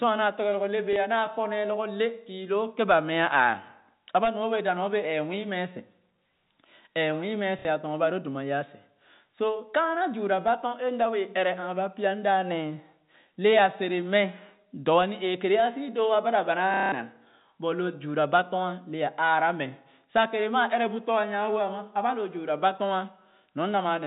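Telephone-band speech, with the 4 kHz ceiling of G.711 coding, suffers packet loss with the last packet repeated at 0.93–0.96 s, 7.59–7.65 s and 16.74–16.92 s. The stuttering buzz (about 33 Hz, fitting 30 ms packets) sets it apart from smooth, fading concealment.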